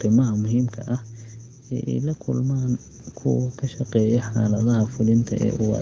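Right from the start, about 0.05 s in, there's automatic gain falling: the gain control decided the input was too hot or its background too noisy and eased its gain down by about 7 dB over roughly a second and a quarter, finishing near 1.32 s. You hear the speech begin loud and then settle lower, with the background sinking right along with it, since the whole signal is being turned down, not just the talker.

Then it swings the other way. From 1.86 s to 2.89 s there's automatic gain rising, ending just before "kuwa ka shaqeeya". The control now judged things too quiet and brought the gain back up by about 4 dB, so speech and background swell together over about a second. The audio itself runs through call-style mic processing and a wideband codec, and the light coding you can hear fits a rate of around 16 kbit/s.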